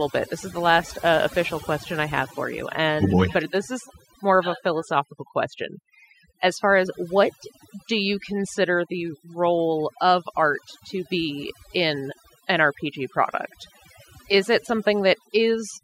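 Throughout, overdone noise removal strips bands near the noise estimate, leaving twinkling specks; unlike a plain gate, it cuts single bands rather than the whole signal.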